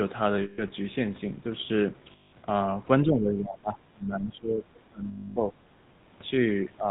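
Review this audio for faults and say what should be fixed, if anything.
The whole clip passes through the GSM full-rate codec at 13 kbps, which models the vocal tract with a sparse pulse excitation and passes nothing above 4 kHz, giving the speech a plainly audible buzzy, gravelly roughness. Preventing this means carrying the call on a wideband codec such as AMR-WB or Opus instead of legacy full-rate GSM.

Lost GSM frames at 0.42 to 0.63 s, 2.12 to 2.33 s and 5.08 to 5.37 s were concealed by repeating the last good frame, so the sound freezes into a rough metallic ring for 160, 200 and 280 ms. Preventing these dropouts means improving radio coverage, or adding interleaving and stronger channel coding so bad frames are rarer.

From 3.02 to 5.54 s the speech dips by up to about 20 dB, across roughly two seconds in total. This is likely speech suppressed in double talk, where the echo canceller could not separate the talker from loudspeaker echo and attenuated both. 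Preventing it means tuning the canceller's double-talk detector so it holds attenuation back while both sides speak.

At 5.98 to 6.06 s the background is gated by the echo canceller, which pulled the microphone down during loudspeaker playback, so the room sound briefly drops about 9 dB before returning. Preventing this means using gentler suppression or comfort noise so the background stays steady when the canceller engages.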